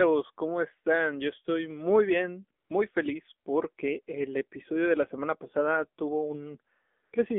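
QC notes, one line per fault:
throughout, AMR narrowband mobile codec: speech is rebuilt from a low-rate vocal-tract model inside a 250 Hz to 3.4 kHz band, so it sounds thin, buzzy and plainly synthetic, consistent with AMR-NB at around 7.4 kbps.
2.60–2.70 s and 7.04–7.12 s, AMR comfort noise: speech frames stop for 100 ms and then 80 ms, and the receiver fills the gaps with smooth generated noise, so the real background briefly switches to a steady hiss.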